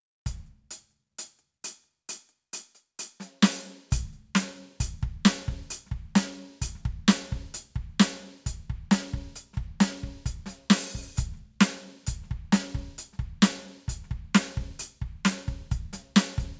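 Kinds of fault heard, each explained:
No technical fault can be heard anywhere in this music. There is nothing to list for the recording.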